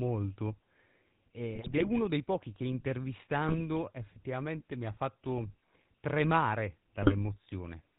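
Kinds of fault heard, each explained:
GSM full-rate codec: The whole clip carries the sound of the original GSM speech coder. It rebuilds the voice from a vocal-tract model driven by sparse, regular pulses. Nothing above 4 kHz survives. The speech sounds plainly buzzy and gravelly, which fits the 13 kbps full-rate coder.
GSM bit errors: Flipped bits reach the decoder and corrupt filter, pitch or gain values frame after frame while the bad patch lasts. The speech squawks and gargles at 1.54–1.89 s before "dei pochi che", 3.48–3.61 s, 5.38–5.41 s after "effettivamente mi ha", and 7.03–7.14 s.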